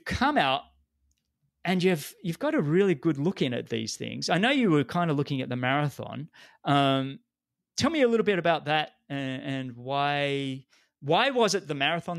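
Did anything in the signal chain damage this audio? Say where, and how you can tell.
No, nothing along the signal chain audibly damages this speech recording, and its level, continuity and timing hold steady throughout.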